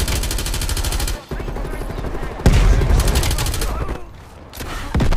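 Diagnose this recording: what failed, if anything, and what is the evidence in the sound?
The failure sits at the driver or buffer stage. It is chunks out of order, at 3.57 to 3.59 s. One 10 ms chunk arrived late and played after the chunk that should have followed it. No audio is missing, but two short pieces are swapped. That leaves three hard joins within about 20 ms. Each join breaks the waveform's continuity, so the moment sounds like a brief jumbled stutter.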